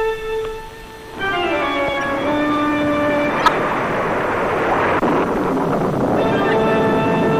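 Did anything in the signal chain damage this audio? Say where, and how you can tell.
Yes. The codec stage is the likely cause of the damage throughout: MP3 compression at a bitrate low enough to be plainly audible, consistent with something like 64 kbps. Weak frequency detail flickers between frames, giving a watery, swirling texture and smeared attacks.

The decoder also played corrupt frames in three places: 2.01 to 2.04 s, 3.40 to 3.53 s, and 6.49 to 6.54 s. Flipped bits put energy at the wrong frequencies, producing short glitches spanning a few frames. The first is quieter, around -15 dBFS, and the later two are near -5 dBFS.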